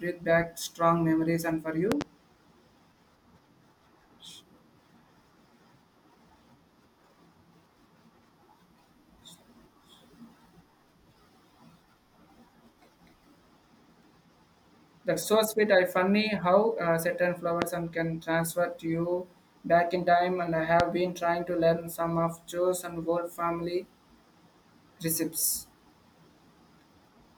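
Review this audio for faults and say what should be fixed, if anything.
A sudden voltage pulse, likely from a connector, switch or static discharge, was added to the signal. This produced a loud pop peaking roughly 20 dB above the speech, which carries on underneath. There is a double pop at 1.92–2.04 s after "strong memories and for", a single pop at 17.62–17.65 s after "funny how uh certain", and another at 20.80–20.83 s before "been trying to learn".

To prevent this, secure all connectors, avoid switching equipment during recording, and ground the gear against static.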